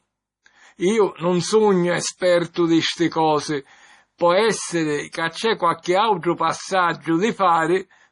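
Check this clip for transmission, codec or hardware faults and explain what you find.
Two codec faults are present in this speech clip.

MP3 compression, throughout: nothing reaches above 10.5 kHz, and heavy watery swirling suggests bits ran short, likely from MP3 coding at around 32 kbps.

Pre-echo at 2.18–2.21 s, 2.53–2.56 s, 4.18–4.21 s, 5.12–5.15 s and 5.83–5.86 s: block-spread quantisation noise puts 25–37 ms of hiss before sharp attacks, softening them.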